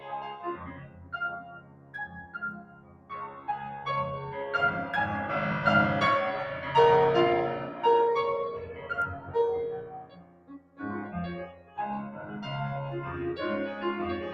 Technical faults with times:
0.00-14.33 noise suppressor applied to music or sounds
0.56-1.13 sound cut by the noise suppressor
1.40-3.48 sound cut by the noise suppressor
8.62-9.35 sound cut by the noise suppressor
9.78-10.81 sound cut by the noise suppressor
11.47-11.78 sound cut by the noise suppressor
12.14-12.32 sound cut by the noise suppressor

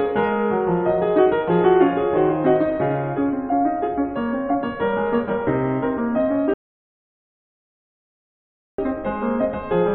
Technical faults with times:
6.54-8.78 rebuffering stall

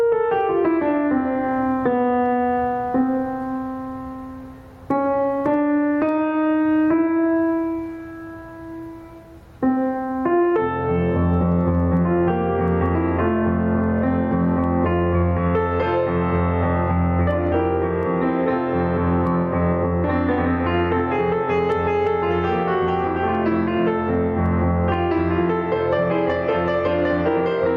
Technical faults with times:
0.00-27.77 gain pumping

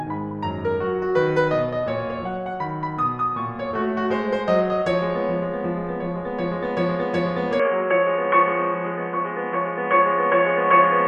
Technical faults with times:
7.60-11.07 input switched to a poorer device

